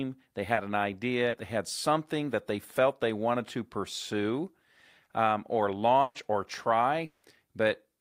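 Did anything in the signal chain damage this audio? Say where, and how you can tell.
Yes, the damage happened in the network stage of a call. At 0.53 to 0.59 s and again at 1.29 to 1.35 s, just before "they had something that", there is a brief smear where the sound wobbles instead of moving on cleanly. This is short concealed packet loss. About 40 ms of audio never arrived in time. The receiver filled each hole by extending the preceding sound, then blended back into the real signal.

From 6.01 to 6.17 s, right after "um or", the sound stalls into a held, fading continuation before picking up further along. This is a burst of packet loss. Roughly 140 ms of consecutive audio was lost or arrived too late to play. The decoder stretched the last sound across the gap while turning it down, and nothing from that stretch was recovered.

At 7.05 to 7.25 s there is a longer frozen stretch. The last sound hangs on and decays for about 180 ms, then the audio resumes further on with that portion gone. 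No silence is left in the gap, because concealment covers all of it. The likely cause is a long network dropout, a brief stretch where no packets reached the receiver and it improvised the whole gap.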